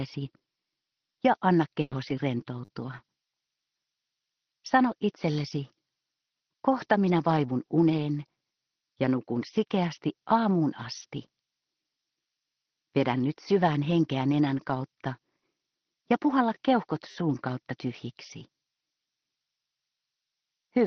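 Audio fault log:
throughout, switching supply whistle: a thin, steady high whistle sits between 10.4 and 10.6 kHz, drifting slightly, roughly 35 dB below the sound. On a spectrogram it is a narrow wavering line well above the 6 kHz band edge of the 20 kbps Opus call audio.
1.81–1.94 s, burst of packet loss: a gap of about 100 ms had to be filled. The receiver extended the last sound and faded it, so it turns into a held buzz or dwindling hiss, and 60 ms of material is skipped. The waveform shows a smooth decaying stretch, then an abrupt resumption.
1.91–1.97 s, lost packet rebuilt from error correction: 60 ms was decoded from the low-bitrate copy carried in the following packet, so there is no gap, but this stretch sounds grainier and noisier. A spectrogram shows smeared, blotchier texture against the surrounding frames.
2.65–2.69 s and 17.11–17.15 s, repeated buffer: each time a 10 ms block is played four extra times because fresh audio arrived late. 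With such short blocks it sounds like a brief buzz. The waveform shows an identical 10 ms pattern stamped out repeatedly with hard seams.
7.52–7.99 s, jitter buffer speed-up: the receiver trimmed excess buffered audio by cutting out short pitch-period slices, about 50 ms in total, so playback runs at 111% speed with the pitch unchanged and sounds briefly hurried. A spectrogram shows events slightly compressed in time, with the harmonics unshifted.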